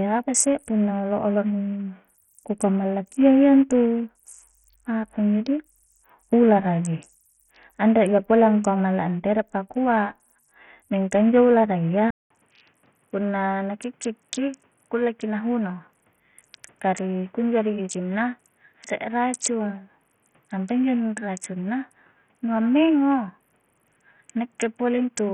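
From the start, the speech is likely squeezed through Bluetooth SBC compression at a very small bit pool, consistent with roughly 48 kbps. The upper sub-bands are starved of bits, so the treble flickers and drops out, and a gritty, aliased noise rides on the voice throughout.

At 12.10 s the input likely switched to a poorer device. A silence of about 200 ms marks the changeover, after which nothing sounds above 12.9 kHz, the level falls by a few decibels, and a faint new noise floor sits well beneath the speech until the end.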